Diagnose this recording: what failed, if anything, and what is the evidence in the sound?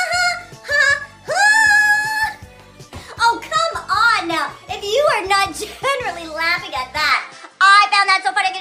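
Device layer: from 7.11 s the sound abruptly dulls, with nothing above 10.3 kHz, a level shift and faint new noise. The input likely switched to a poorer device.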